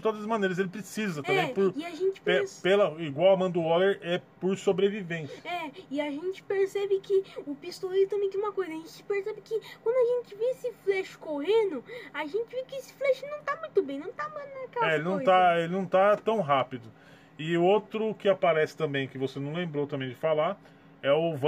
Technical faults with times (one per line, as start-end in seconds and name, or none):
none